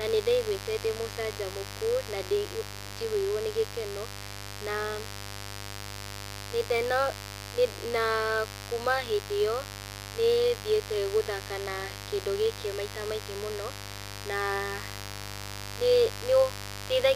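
Speech with a steady, raspy mains buzz throughout, built on 50 Hz harmonics and sitting about 10 dB below the voice, pointing to switching interference such as a dimmer or poor shielding.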